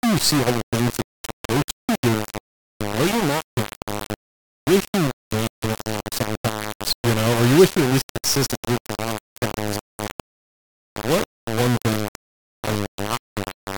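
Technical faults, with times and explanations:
Throughout, low bit depth without dither: the speech is coated in harsh, grainy distortion that rises and falls with the signal, barely below it in level. Quiet stretches sputter or vanish. This likely comes from rounding to about 3 bits. Dither would give steady hiss instead.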